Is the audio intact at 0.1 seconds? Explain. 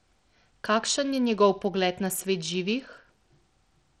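No. At 0.1 s, as throughout the speech, the sound is gritty and dull, likely from Bluetooth SBC compression at a starved bit pool, which fits roughly 80 kbps. Top sub-bands lose their bits, so a spectrogram shows treble flickering out in blocky patches over a grainy noise floor.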